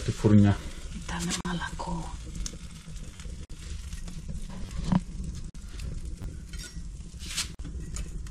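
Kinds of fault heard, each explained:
repeated buffer: a slice of about 10.7 ms, which fits a 512-sample buffer, replays up to three extra times, giving a brief buzzy stutter rather than silence.
gap at a join of encoded pieces: silences of 44 to 48 ms open every 2 s with smeared edges, then sound resumes and nothing repeats.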